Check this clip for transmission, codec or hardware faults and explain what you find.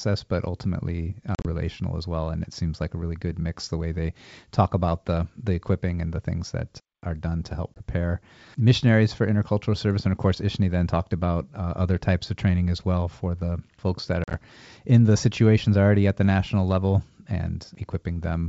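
The clip has packet loss on an ADPCM call, heard three times. The G.722 wideband speech around it sounds clean, with at most faint coding hiss.

At 1.35 to 1.48 s, between "but ultimately" and "as well and it", about 80 ms of sound is lost in gaps spread over 100 ms. The longest gap is 40 ms.

At 7.74 to 7.81 s, just after "are done to help", about 20 ms drops out.

At 14.24 to 14.36 s, between "for the folks that" and "in the situations already", about 60 ms is lost across 100 ms. The longest gap is again 40 ms.

Each hole is hard-edged silence. The decoder's predictor and step size then fall out of step with the sender's, so speech returns slightly distorted until it settles within some tens of milliseconds. That recovery is what distinguishes this from a plain dropout.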